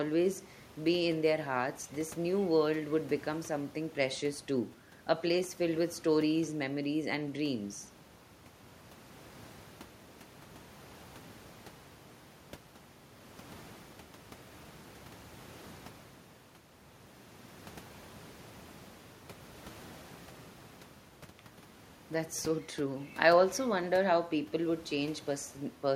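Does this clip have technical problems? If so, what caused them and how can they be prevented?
No, no technical problems heard.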